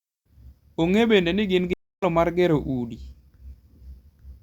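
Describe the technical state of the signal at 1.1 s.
At 1.1 s the speech signal is intact, with no audible fault at that moment.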